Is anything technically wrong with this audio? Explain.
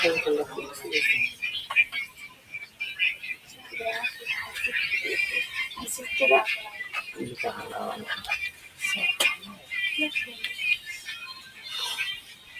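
Yes. A noise suppressor built for speech is running on this non-speech audio throughout. It mistakes steady and decaying sound for noise and turns it down, so the level pumps and thins, with a gain swing of around 15 dB.

This noise suppressor cut the sound at 2.07–2.81 s, 3.35–3.73 s, 6.87–7.14 s, 8.51–8.82 s, 9.36–9.72 s, 10.26–10.43 s, 10.78–11.69 s and 12.16 s to the end. Drops reach about 6 to 12 dB. Sustained parts and tails sink or stop early while sharp onsets still pass.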